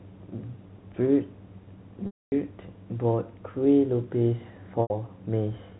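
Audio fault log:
2.06–2.32 s and 4.82–4.90 s, packet loss with pitch repetition: a stretch of packets never arrived, about 260 ms of audio at the first point and 80 ms at the second, and the receiver bridged each gap by looping the last pitch period of the G.711 telephone stream. The short gap holds as a brief buzzy sustain. The long one goes buzzy, fades to silence, then cross-fades back into the speech.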